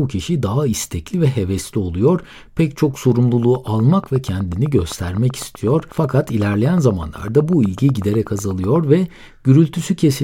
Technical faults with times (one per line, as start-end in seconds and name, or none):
3.43-8.77 train of clicks